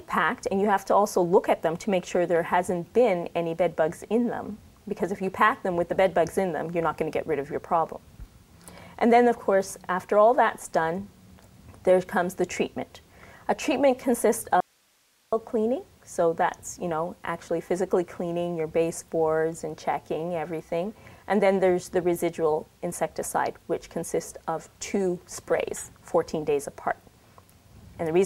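Audio dropout to a faint residue from 14.60 to 15.32 s: the sound cuts out abruptly for 0.72 s, leaving only hiss roughly 40 dB below the signal, then snaps back. The source was likely lost briefly while the downstream path stayed live.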